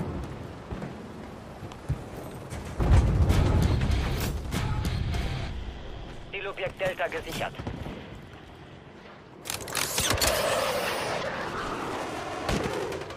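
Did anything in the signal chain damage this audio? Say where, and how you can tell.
Yes. The damage sits at the codec stage, in the compressed data itself: five brief blips at 0.70, 2.79, 6.32, 9.01 and 11.22 s, each under 20 ms. This is damaged data in a compressed stream. Corrupted bytes make the decoder misread those frames and lose sync until it finds the next frame header. On a spectrogram each blip shows as a thin vertical mark. The waveform shows a short, abrupt discontinuity at each time.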